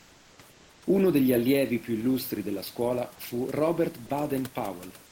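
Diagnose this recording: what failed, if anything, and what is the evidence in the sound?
Comfort noise in place of the background, at the codec stage. From 0.00 to 0.38 s and again from 0.50 to 0.82 s, the real room noise, which sits about 31 dB below the loudest passages, gives way to a steady, featureless hiss about 2 dB quieter. This is likely discontinuous transmission, consistent with Opus DTX: the sender paused during non-speech and the receiver synthesised shaped noise. Unlike a noise gate, which would leave near-silence, these gaps are filled with plausible but detail-free noise.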